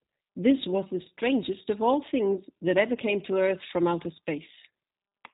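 From start to finish the speech carries plainly audible G.729 codec damage, consistent with the G.729A variant at 8 kbit/s. The codec rebuilds each 10 ms frame from a vocal tract filter, a pitch predictor and a sparse handful of pulses, so voices sound rough and faintly synthetic. On a spectrogram the energy stops sharply near 3.8 kHz, with an empty band above, and the harmonics look smeared and grainy.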